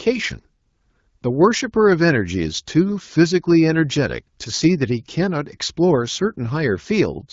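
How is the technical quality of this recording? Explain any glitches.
The technical quality is good, with no glitches to explain, and the speech keeps the clear, band-limited character of an AMR wideband (HD Voice) call.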